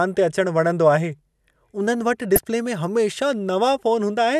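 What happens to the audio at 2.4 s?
At 2.35 to 2.39 s the speech is hit by damaged data in a compressed stream: a short stretch of the encoded stream is corrupt, so the decoder misreads those frames, loses sync and hunts for the next valid frame header. The result is a brief chirp or squawk lasting about 34 ms. On a spectrogram it appears as a narrow vertical smear of unrelated broadband or tonal energy breaking the speech harmonics. The waveform shows a sudden discontinuous burst there.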